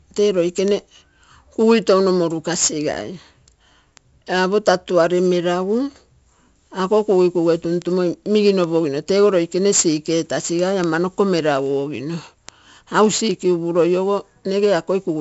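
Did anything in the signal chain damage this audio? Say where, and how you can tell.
Yes, at the codec stage. 4-bit ADPCM compression runs throughout this speech, heard as heavy gritty hiss riding every loud passage and rough attacks where the adaptive step lags. On a spectrogram, nothing appears above 7.7 kHz, which fits a 64 kbps stream, and the noise floor rises and falls with the signal level.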